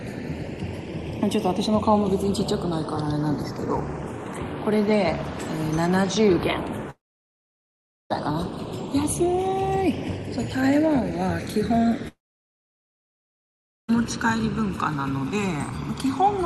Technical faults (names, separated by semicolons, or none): channels drifting apart; long network dropout